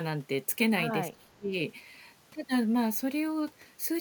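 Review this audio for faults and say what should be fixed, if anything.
An echo canceller likely failed to separate the near talker from loudspeaker echo while both sides spoke, and turned both down. The result is speech suppressed in double talk from 1.1 to 1.54 s, dipping by roughly 25 dB at its deepest. More reliable double-talk detection, with gentler residual-echo suppression while both sides speak, would prevent it.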